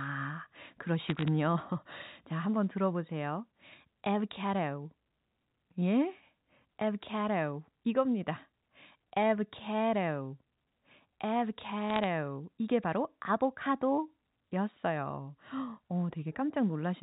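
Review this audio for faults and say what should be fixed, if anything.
Bit errors on the digital phone line cause sharp ticks and crackle from 1.06 to 1.28 s and 11.90 to 12.04 s. Flipped bits corrupt individual G.711 samples, at an error rate of very roughly 0.3 percent. Preventing them requires a cleaner digital link, or error detection with concealment on the transmission path.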